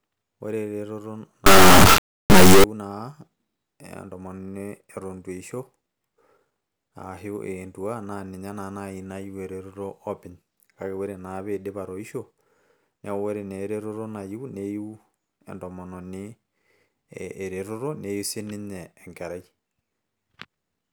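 From 1.46 to 2.64 s, an integer read as float fault hits the speech: 32-bit integer samples are interpreted as 32-bit floats, so values land near zero or far past full scale. The result is a harsh, extremely loud buzzing square wave, collapsing to silence where the speech goes quiet.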